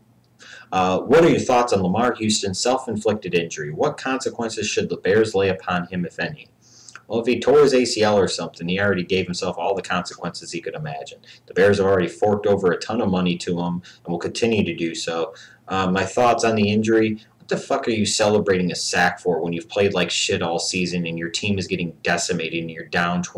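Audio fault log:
Throughout: hard clipping. The signal is driven about 12 dB past what one stage can pass, so its peaks are sliced flat. Only a small share of the sound, under two percent, goes over. Those flattened tops add high harmonics, heard as harsh crackle on loud moments.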